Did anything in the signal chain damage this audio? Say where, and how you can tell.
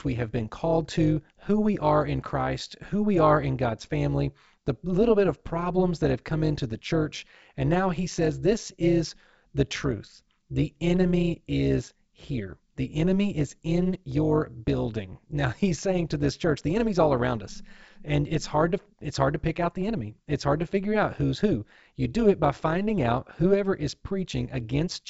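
Yes. A frame-based processing stage, probably call processing, rebuilt the speech with windows whose overlap does not sum to constant gain, causing overlap-add ripple throughout. Level swings about 11 dB around 200 times per second, heard as a metallic buzz with extra tones around each note across the G.722 wideband range.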